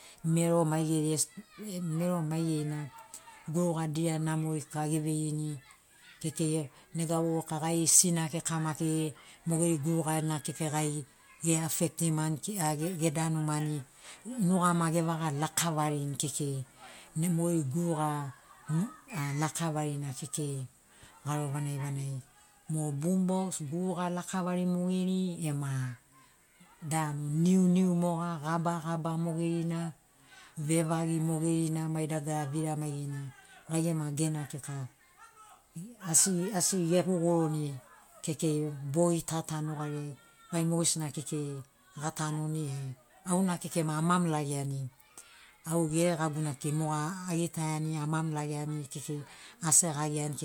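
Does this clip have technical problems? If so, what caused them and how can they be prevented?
No, the speech signal carries no audible technical faults, so there is nothing here that needs a cause or a preventive fix.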